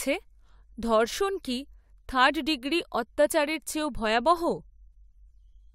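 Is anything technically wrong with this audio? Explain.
No, nothing technically wrong can be heard in this speech recording. No fault turns up anywhere in the clip.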